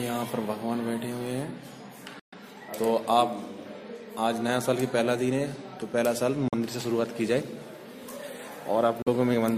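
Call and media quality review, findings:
Silent holes at 2.19–2.34 s, 6.48–6.54 s, 9.02–9.08 s; likely Bluetooth dropout on the headphone link. Packets arrived late and were discarded. Gaps with abrupt edges or a few-ms fade, and playback resumes ahead, skipping about 128 ms and 43 ms of material rather than pausing and continuing, unlike a buffer stall.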